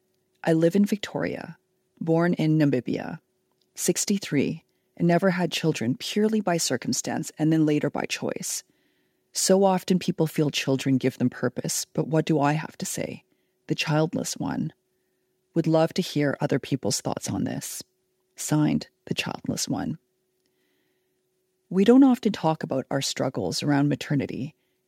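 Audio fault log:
No fault is present in this speech clip.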